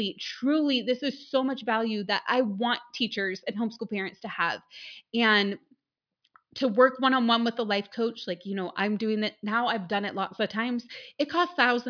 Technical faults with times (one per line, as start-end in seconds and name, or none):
none